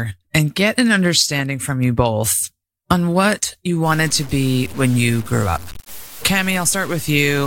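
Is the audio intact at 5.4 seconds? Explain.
No. At 5.4 seconds the speech is gritty. The grain starts at 3.86 s, right after "both on what you", and lasts to the end. This is low bit depth without dither. The sound fits about six bits, likely cut down by truncation. The rounding error tracks the speech, so the distortion sits roughly 20 dB below it and shifts as the speech changes. Quiet parts turn rough. The quietest drop to silence or sputter.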